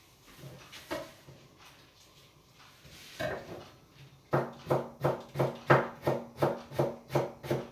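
Nothing in these everyday sounds calls for comment; there are no technical faults to point to anywhere in the recording.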